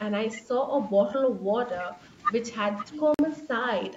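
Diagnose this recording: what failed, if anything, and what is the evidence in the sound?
Between 0.36 and 0.44 s the speech level dips by roughly 10 dB for about 70 ms. That fits speech suppressed in double talk, likely from call processing. With both sides active, the echo canceller could not tell the near talker from loudspeaker echo and attenuated everything. On a waveform the envelope sags briefly.

From 1.35 to 1.49 s the room background drops by about 11 dB for roughly 150 ms and then returns. This is background gated by the echo canceller, a call-processing stage. While far-end audio was playing, the canceller clamped the microphone path hard and released it once the loudspeaker signal passed. On a spectrogram the noise floor shows a lighter rectangular band across all frequencies, with fairly square onset and release edges.

At 3.14 to 3.19 s the audio goes fully silent for 46.4 ms, which fits two lost packets. 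A Bluetooth dropout on the playback link is the likely cause: packets missed their deadline and were discarded. Sound resumes partway along, as though it had kept playing through the gap. The waveform shows a flat silent hole. On a spectrogram it is a clean vertical black gap spanning the full band, which here tops out at 8 kHz.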